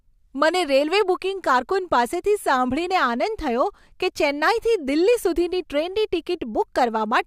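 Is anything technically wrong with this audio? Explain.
No, there are no technical faults.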